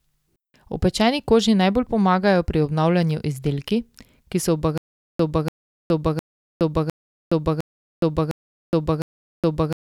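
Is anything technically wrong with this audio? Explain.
Yes. From 4.78 s, right after "obnavljanju izdelki ki so", a 0.29 s burst of speech repeats seven times to the end, each followed by about 0.42 s of dead silence. This stutter with silent gaps likely comes from a stalled stream replaying its last fragment, with the intended audio lost.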